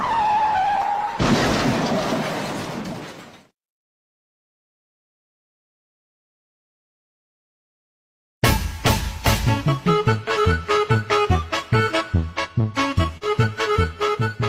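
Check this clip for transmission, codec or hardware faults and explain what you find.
There is one transmission fault, a short concealed packet loss near the end at 13.17 to 13.23 s. About 40 ms of the stream arrived too late for the decoder, and the receiver covered 39 ms of the gap by extending the preceding sound before crossfading back. It registers as a brief smear or wobble. On a spectrogram the harmonics or noise texture run unnaturally flat for that stretch. The waveform shows a repeated cycle or steady noise instead of changing detail.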